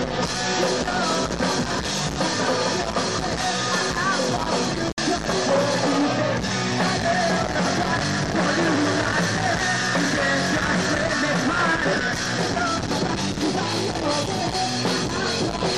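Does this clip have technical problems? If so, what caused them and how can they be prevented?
Yes. A Bluetooth dropout at 4.92 to 4.98 s cuts the sound to silence for 56 ms, then it resumes further on as if it had played through. This was likely late wireless packets being discarded, which fits about three lost packets. Keeping the headphones near the source and away from crowded Wi-Fi prevents it.

A time-stretched section from 11.0 to 13.68 s runs 1.55 times faster at unchanged pitch, sounding rushed. This was likely software squeezing the audio to fit a length by dropping short pieces. Trimming content to length instead of stretching it prevents this.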